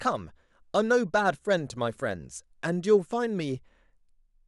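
Nothing in this recording trips the ear as a fault: no glitch, dropout or odd artefact turns up anywhere along the way.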